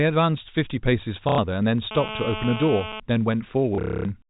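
From 1.29 to 1.38 s, packet loss with the last packet repeated sets in: about 90 ms of audio never arrives and the receiver replays its final packet, giving a short robotic stutter that fits three 30 ms packets. From 1.91 to 3.00 s, a nearby phone on a call transmits in bursts at 217 Hz that the audio circuit picks up. This GSM phone buzz is a steady, raspy 217 Hz drone only about 7 dB below the speech. From 3.75 to 4.05 s, packet loss returns, with 270 ms missing across 300 ms. The replayed packets in the longest 240 ms run form a buzzing, stuttering stretch.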